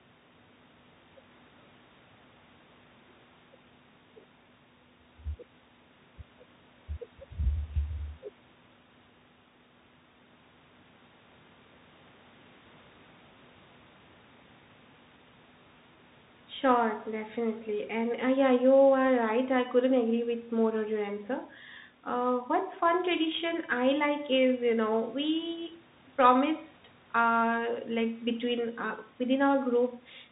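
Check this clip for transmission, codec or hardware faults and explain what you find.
One codec fault runs through the whole recording: the speech has been carried over a Bluetooth CVSD headset codec link. CVSD encodes each sample as a single up-or-down bit and keeps resizing its step, which fits a 64 kbps stream. The link is narrowband, so nothing above about 3.8 kHz survives, and the speech sounds muffled and telephone-like. The damage is plainly audible: fast, loud transients overrun the adapting step and distort, sibilants come out scratchy, and a grainy hiss sits beneath the speech. The room's own background noise, about 34 dB below the speech, belongs to the recording space and is not a system fault.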